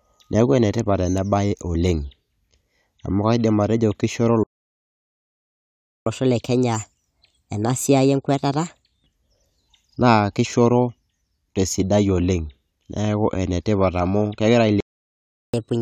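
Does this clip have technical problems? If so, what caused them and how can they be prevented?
Yes. The speech has two playback stalls, from 4.43 to 6.06 s (about 1.6 s) and from 14.80 to 15.54 s (about 0.7 s). The output goes silent in mid-flow and then resumes. The likely cause is that the player's buffer ran dry or its audio thread was blocked. Unlike a dropout in the recording, the audio just halts and carries on. A larger playback buffer and a high-priority audio thread would prevent this.

Each stall is followed by catch-up at higher speed. From 6.06 to 9.06 s the speech runs 1.15 times faster and roughly two semitones higher. From 15.54 s to the end it runs 1.25 times faster and roughly four semitones higher. The player is resampling its backlog to win back lost time. A wrong sample rate would shift pitch throughout, but here the speed-up starts right after the silence, and the first one then returns to normal. 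Avoiding the stalls removes the need for catch-up, and a time-stretching catch-up method would keep the pitch unchanged.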